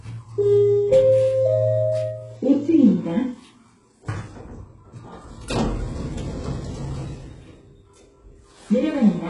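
Throughout the recording, the treble sounds bright but synthetic, with gritty, metallic edges on hissy and noisy parts and nothing above 11.1 kHz. This is likely HE-AAC compression, and the heavy damage points to a very low bitrate near 12 kbps. Only the lower band is truly coded. The upper range is patched in by copying lower bands upward, so its harmonics don't align. Plain low-pass filtering would sound dull, not falsely bright.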